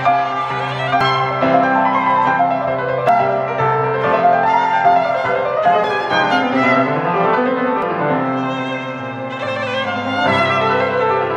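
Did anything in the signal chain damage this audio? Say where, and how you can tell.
Yes, at the codec stage: damaged data in a compressed stream produces short glitches at 1.01–1.04 s, 3.09 s, 5.84–5.87 s and 7.82–7.86 s. Corrupted frames are misread or refused by the decoder, which loses sync and searches for the next frame header, rather than leaving the clean silent gaps a buffer underrun would leave.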